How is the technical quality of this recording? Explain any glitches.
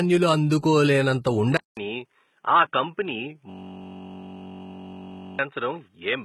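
The technical quality is poor. Heavy compression runs through the whole recording, the input changes for the worse partway through, and a steady buzz takes over for nearly two seconds.

HE-AAC compression affects the whole clip. The damage sounds heavy and fits a low bitrate of around 16 kbps. Only the lower spectrum is coded properly, and the treble is rebuilt by copying lower bands upward under a coarse envelope. Its harmonics therefore don't line up with the real ones, so the top end of the speech sounds synthetic. Sibilants come out gritty, metallic or lispy. Codec artefacts are the likely cause.

The input switched to a poorer device at 1.57 s, right after "అందుకో లేనంత". A gap of about 200 ms precedes the change. From there to the end, nothing is heard above 3.8 kHz, so the speech turns dull and boxy. The level drops a few decibels, and a faint new background noise appears well below the speech. 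This is most likely a change to another microphone or to a headset's narrowband call profile, each with its own tone and noise.

A system hang loop runs from 3.50 to 5.39 s. The computer or driver froze while the sound hardware kept replaying the same ring buffer. One 21.33 ms slice of audio repeats exactly, some 89 times, which fits a 1024-sample buffer. Because the slice is so short, the repetition fuses into a steady buzz at 46.9 Hz and replaces the speech in that stretch.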